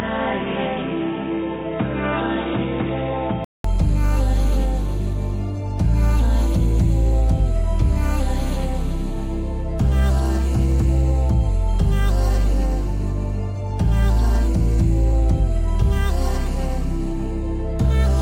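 From the start to 3.64 s the everyday sound is dull and boxy, with nothing above 3.8 kHz, a few decibels quieter, and carrying a faint noise floor of its own. A 200 ms silence at 3.64 s precedes the return of full, brighter sound. This likely points to an input switched to a poorer device. Unlike a plain band-limiting filter, the level, tone and background all change together, with a gap at the switch.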